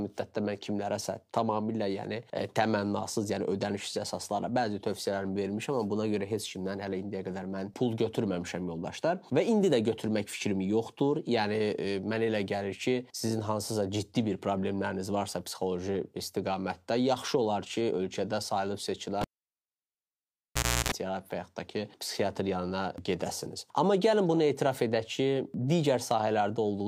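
At 19.21 s a cable is pulled and plugged in: a pop, 1.65 s of near silence, 0.34 s of 60 Hz buzz, then a second pop, unlike a clean dropout.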